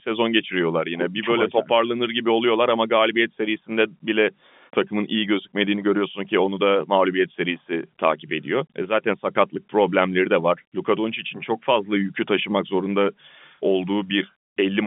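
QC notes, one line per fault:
Nothing stood out on listening to this speech, which comes across with the narrow band of an ordinary telephone line.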